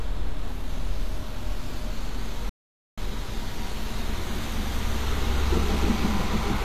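All the way through, the treble sounds synthetic, gritty and metallic. That's likely HE-AAC compression rebuilding the top end, which fits a low bitrate around 24 kbps. At 2.49 s the audio simply stops for about 0.48 s, a playback stall, then picks back up at 2.98 s.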